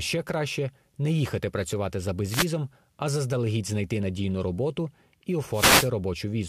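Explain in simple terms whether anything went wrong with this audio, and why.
Yes: two wireless microphone noise hits. The radio signal from the microphone briefly faded, so static burst through as a short swish, from 2.29 to 2.47 s after "не їхати працювати за", and from 5.52 to 5.90 s after "знайти надійну роботу і".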